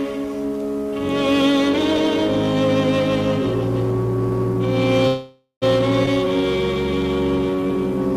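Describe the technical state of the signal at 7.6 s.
At 7.6 s the audio is inside a jitter buffer slow-down running from 7.50 to 7.68 s. The receiver repeats single pitch periods or bits of pause to rebuild its reserve, adding 43 ms and playing at 81% speed. Unlike a resampling slow-down, pitch stays unchanged.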